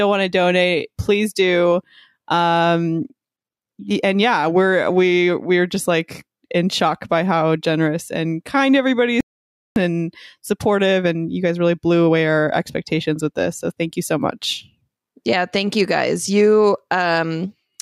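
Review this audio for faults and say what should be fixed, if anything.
Audio dropout to silence: input was likely lost, and silence was written from 9.21 to 9.76 s, after "how generous and kind", cutting 0.56 s to dead silence before "and supportive". Secure the input connection and check mute controls before recording.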